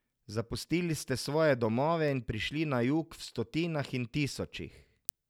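From about 0.21 s to 5.09 s there's a steady run of word clock ticks, around fifteen, one roughly every 0.4 s. They're sharp and uneven in strength. A receiver on its own clock is drifting by around 70 ppm, slipping a sample each pass.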